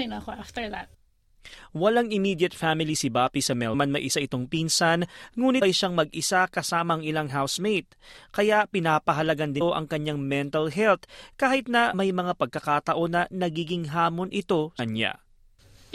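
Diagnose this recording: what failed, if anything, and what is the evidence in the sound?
The failure is at the codec stage: compressed frames were skipped, either missing from the file or refused by the decoder as damaged. The speech jumps forward at 3.73, 5.61, 9.60, 11.92 and 14.78 s. The gaps are roughly half a second at the first two, about 0.2 s at 9.60 and 14.78 s, and about 0.1 s at 11.92 s. Each skip is a run of whole frames, with spacing that fits 21.3 ms frames, so the audio closes up across the hole.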